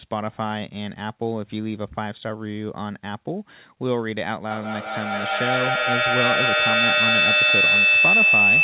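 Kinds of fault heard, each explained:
Feedback howl: from 4.5 s to the end, the sound is caught in a loop between a loudspeaker and a microphone, and each pass comes back stronger, so the repeats swell instead of dying away. It settles into a piercing tone around 3 kHz, the loop coming round roughly every fifth of a second, and peaks about 9 dB above the speech. A spectrogram shows a bright horizontal line near 3 kHz; the waveform shows a rising envelope that never decays.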